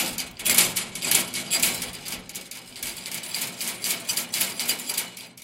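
From 0.57 s to 1.51 s the sound drops into a Bluetooth SBC bit pool drop: the link appears to have been congested, so the encoder cut its bit allocation roughly in half, which fits a fall from a bit pool of about 28 to 14, near 108 kbps. The treble dulls and a gritty grain rides on what remains. On a spectrogram the upper sub-bands go dark or patchy for that stretch, with speckled quantisation noise below, then fill back in at 1.51 s.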